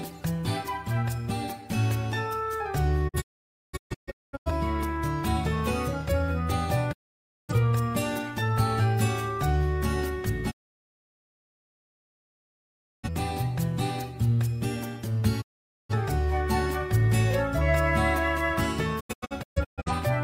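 Digital broadcast dropouts mute the audio at 3.07–4.51, 6.91–7.53, 10.50–13.09, 15.40–15.94 and 18.99–19.91 s. The receiver fades out over 20 ms when frames fail. The first and last dropouts break into several short holes.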